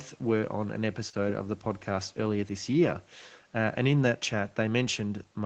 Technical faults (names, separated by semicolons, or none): short stall from a late packet